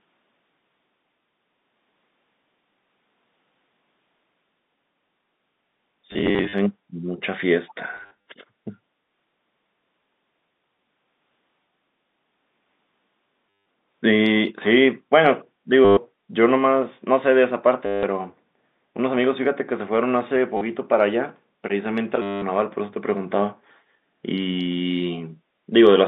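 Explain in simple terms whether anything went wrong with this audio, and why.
Several times the speech briefly turns into a robotic stutter, a rapid buzzy repeat of the same tiny fragment. It happens at 6.11 to 6.53 s, 7.96 to 8.17 s, 13.54 to 13.63 s, 15.85 to 15.97 s, 17.86 to 18.03 s, 20.57 to 20.61 s and 22.22 to 22.42 s. This is packet loss with last packet repeated. Pieces of the audio went missing in transit, and the receiver filled each gap by replaying the last piece it had. The buzz repeats about a hundred times a second, which fits packets 10 ms long.

Around 7.67 to 7.73 s, a faint delayed copy of the talking sneaks in about a fifth of a second behind the original, quiet. This is most likely an echo leak. Someone on the call was using a loudspeaker, and their phone's echo cancelling didn't fully catch what its microphone picked back up. That leftover was then sent back down the line.

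The narrow, phone-like sound comes from ordinary landline-style G.711 coding.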